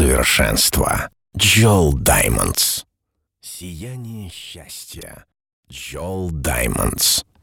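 From 5.8 to 6.85 s a level change of around 20 dB arrives as zipper noise: the gain jumps in unsmoothed steps, roughly a hundred per second, each leaving a tiny click. This ramp carries a rapid, regular ticking that stops when the level settles.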